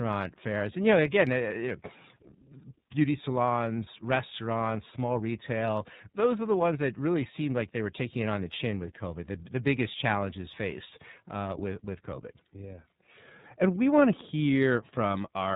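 From start to finish the speech passes through the iLBC codec, a narrowband VoIP coder, and the damage is plainly audible. Each frame's excitation is coded on its own, without drawing on the previous frame, and the result sounds rough and synthetic. The sound fits the 13.33 kbps mode with 30 ms frames. On a spectrogram, all energy stops at a hard ceiling near 4 kHz, leaving the upper band empty for the whole clip.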